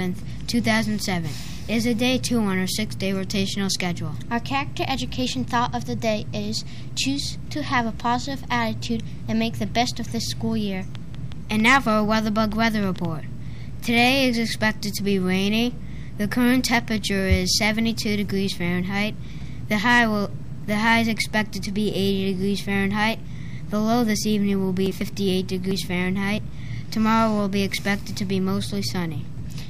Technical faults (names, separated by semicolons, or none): train of clicks